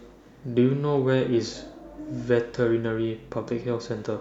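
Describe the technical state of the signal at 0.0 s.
At 0.0 s the signal is intact, with no dropout, clipping, glitch or other technical fault to be heard at that point.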